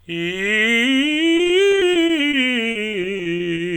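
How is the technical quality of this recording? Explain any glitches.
The music has two stretches of repeated packet loss (robotic sound). The first runs from 1.37 to 2.35 s, the second from 2.71 to 3.59 s. In each, data arrives late or not at all, again and again. The player fills each hole by stretching the last sound it had. About 18% of each stretch is patched this way. Gaps reach 20 ms in the first stretch and 40 ms in the second. The music turns choppy, with fragments missing.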